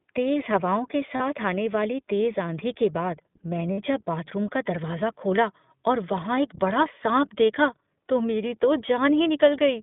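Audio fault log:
throughout iLBC codec: the speech is confined to roughly 150 Hz to 3.6 kHz and has a plainly audible rough, slightly synthetic edge, which fits iLBC's 20 ms frame mode at 15.2 kbps.
1.16–1.22 s and 3.72–3.79 s, lost iLBC frames: right after "तेज हवाओं के" a 40 ms gap, then a 60 ms gap, are filled with a held, faintly buzzy repeat of the last pitch cycle, which fits two and three missing 20 ms frames. Unlike a silent dropout, the gap stays voiced, and the speech recovers immediately afterwards.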